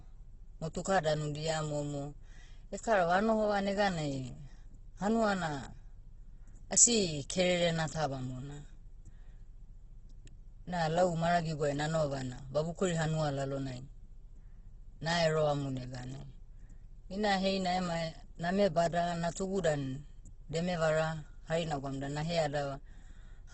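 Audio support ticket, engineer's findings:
Speech grainy, rough throughout, nothing above 8.2 kHz. Likely Opus compression, CELT mode, noise-filling starved bands; fits a bitrate near 12 kbps.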